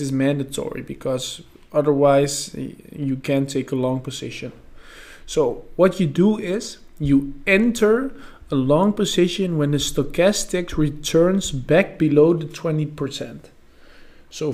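At 11.94 s the sound has a repeated buffer: a piece about 5.3 ms long, which fits a 256-sample buffer, plays three times in a row with a hard join at each repeat, so it comes across as a brief buzz or click rather than a stutter. Fresh audio reached the device late, so it played its last buffer again. Unlike a dropout, nothing falls silent and essentially no audio is lost.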